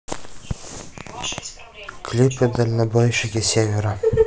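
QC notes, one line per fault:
No fault found.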